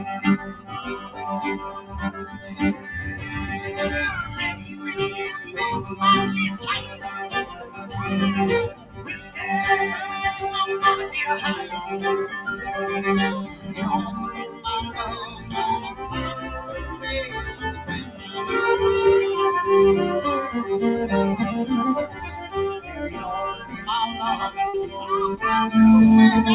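A speech-tuned noise suppressor is left running over the whole thing. It treats sustained parts as noise, so levels swing by about 10 dB and the sound pumps and thins.

The sound is cut by the noise suppressor from 0.38 to 2.88 s, 4.53 to 9.36 s, 13.45 to 18.35 s and 22.07 to 23.88 s. Held parts and tails sink by up to about 12 dB while attacks punch through.

At 24.68 s there's a short burst of packet loss. The receiver stretches the last bit of sound for about 50 ms, fading it, then skips ahead roughly 60 ms.

Everything is band-limited with nothing above 4 kHz, which fits a G.711-style phone-band call path.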